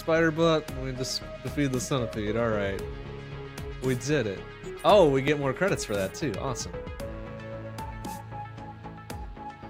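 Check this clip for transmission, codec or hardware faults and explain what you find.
Periodic USB or driver dropouts run from 5.28 s to about 9.25 s, with about three short losses spaced 2.0 s apart. At each one, something blocking the USB bus or audio driver at a fixed interval stalls the stream, and a couple of milliseconds of audio is skipped outright rather than filled with silence, so the waveform jumps across the gap. That discontinuity comes through as an evenly timed tick or pop, heard only where the signal is present.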